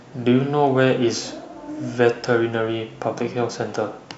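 No technical faults are audible anywhere in the recording.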